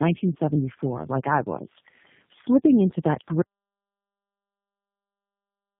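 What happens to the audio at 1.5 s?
At 1.5 s the speech sounds rough, muffled and warbly, with nothing above about 3.6 kHz, as it does throughout. This is tandem speech coding: the audio passed through three low-rate speech codecs in a row, each re-encoding the previous one's already degraded output.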